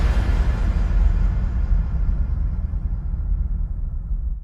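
From 1.95 to 3.03 s, a call bitrate drop turns sound coarse and muffled, consistent with 96 falling to 17 kbps, with no packet-loss gaps.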